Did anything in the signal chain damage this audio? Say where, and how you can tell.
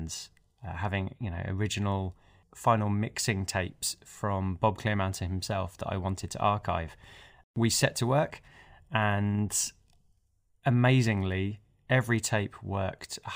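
Yes. Imaging from linear upsampling runs throughout, introduced at the sample-rate conversion stage. The top of the speech band sounds dulled, and a faint mirrored copy sits between 12 and 24 kHz, roughly 25 dB down. This fits straight-line interpolation from 24 to 48 kHz, which barely filters.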